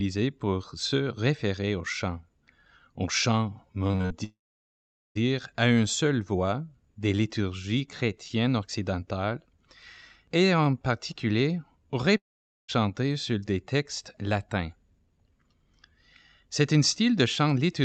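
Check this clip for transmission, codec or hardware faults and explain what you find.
Yes, there are transmission faults: one burst of repeated packet loss and two long network dropouts, all in the call path. The audio is band-limited at about 8 kHz, as the Opus call codec does at a rate near 64 kbps.

From 3.87 to 4.12 s there is repeated packet loss, heard as robotic sound. Five short holes, the longest about 42 ms, are each patched by extending the previous sound. Over half the stretch is concealed, so it sounds choppy. Unlike a dropout, the speech keeps breaking through.

From 4.24 to 5.17 s and from 12.17 to 12.70 s the last sound is briefly continued as a buzz or hiss, fades, then goes silent for about 0.8 s and 0.5 s, most likely from a long network dropout. Speech resumes with the missing part simply gone, with no choppy alternation.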